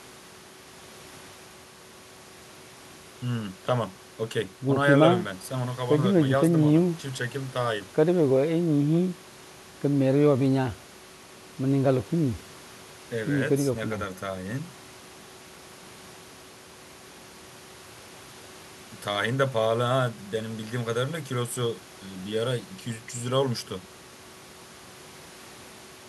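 No technical faults can be heard anywhere in this speech recording. Nothing in it calls for a timestamp or an account of something going wrong.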